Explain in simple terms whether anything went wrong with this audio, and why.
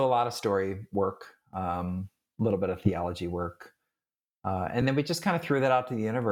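Two short hiccups in the speech come from repeated frames: around 2.85 to 2.89 s and at 4.81 s, a 10 ms chunk of compressed audio plays a second time, giving a tiny stutter. Each repeat stretches the clip by 10 ms, 20 ms in total.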